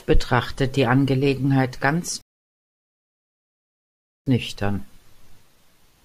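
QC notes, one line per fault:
2.21–4.26 s, rebuffering stall: the speech just drops into silence for about 2.05 s, then picks up exactly where it left off. Nothing's missing. The player ran dry of downloaded audio and sat waiting for more, so the gap adds time rather than cutting anything.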